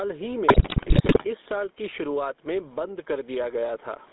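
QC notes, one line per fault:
Throughout: gain pumping. The gain is pulled down on each loud syllable, a swing of roughly 15 dB, so loud and soft passages sit close together and the speech sounds squashed. The likely cause is input gain set far too high with a fast limiter clamping every peak.
Throughout: GSM full-rate codec. The speech has a buzzy, gravelly roughness. The codec rebuilds the voice from a vocal-tract model excited by sparse, evenly spaced pulses. The line band runs from 250 Hz to 3.7 kHz, which points to a 13 kbps GSM channel.
0.48 to 1.25 s: GSM bit errors. For most of this stretch the speech breaks into squawks, pops and gargling. Corrupted bits reach the decoder and distort the filter, pitch and gain values, so the spectrum bends and the level jumps from frame to frame.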